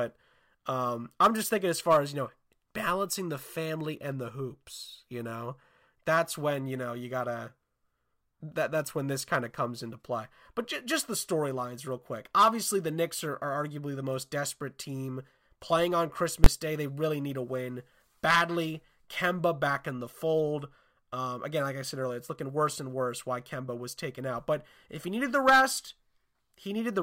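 At 16.44 s, right after "desperate team playing on", the speech is hit by invalid numbers at full scale. A calculation produced infinite or undefined values, which were clamped to the largest positive or negative value for a block of about 20 ms. That block is too short to be heard as two separate edges, so it lands as one sharp bang. On a waveform it appears as a flat-topped slab held at one extreme, far beyond the speech peaks, and on a spectrogram as a bright vertical stripe across all frequencies.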